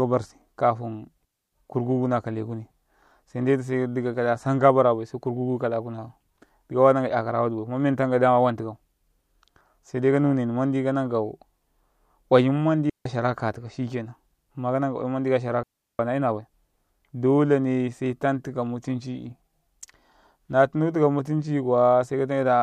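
Three clean holes of near silence cut into the speech, with no noise burst on either side: 1.25 to 1.53 s before "kurkuku na kale", 12.90 to 13.06 s before "shara ka tikau shikenan", and 15.63 to 15.99 s after "ka oyum manɗi kashara". Each is a digital wireless dropout, where the receiver briefly mutes after losing too much data.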